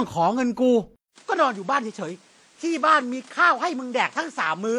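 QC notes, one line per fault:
Throughout, transcoding between lossy codecs: the audio was likely encoded by one lossy codec and then re-encoded by another, which wasted bits on the first one's artefacts and added its own. Two kinds of coding smear are heard together, consistent with WMA then HE-AAC at 48 kbit/s.
0.96 to 4.79 s, input switched to a poorer device: the system likely changed microphones mid-recording, leaving a 200 ms silence at the switch. Afterwards nothing passes above 10.5 kHz, the level drops about 5 dB, and new background noise sits roughly 30 dB below the sound.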